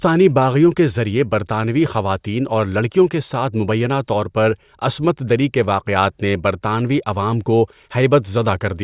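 No technical faults are audible anywhere in it.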